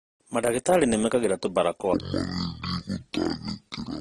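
From the start, the speech carries transcoding between lossy codecs, likely an AAC stage followed by Opus. Their artefacts stack, and nothing survives above 12.4 kHz.

From 1.94 s to the end, a section plays at the wrong speed, about 0.51 times normal. The speech turns slow and deep, roughly ten semitones lower.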